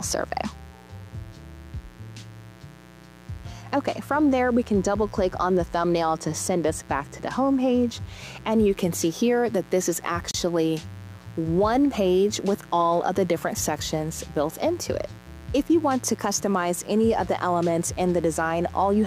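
A steady, raspy mains buzz runs under the audio from start to finish, built on a 60 Hz fundamental with a dense set of harmonics reaching well into the kilohertz range. It sits roughly 25 dB below the programme. That spiky character points to sharp switching pulses, such as from a dimmer, rectifier or unshielded lead, getting into the signal path twice per mains cycle. At 10.31 s the audio cuts to silence for about 32 ms and resumes at 10.34 s. The cause is likely a Bluetooth stall, where delayed wireless packets let the headphone buffer run empty until the retransmitted data arrived.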